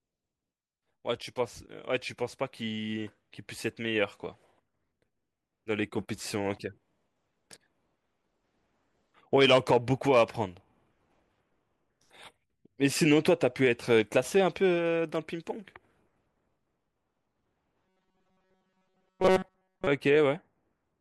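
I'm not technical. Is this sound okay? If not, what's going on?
No. From 17.86 to 19.87 seconds, new audio was likely reaching the playback software too slowly, so it kept replaying the same tiny slice, roughly 5 ms long, to fill the gaps, for most of that stretch. This fault is called robotic sound from repeated short buffers. Those rapid repeats impose a steady 188 Hz buzz, so the voice turns stiff and metallic, loosely tracking the words while real audio in between is skipped.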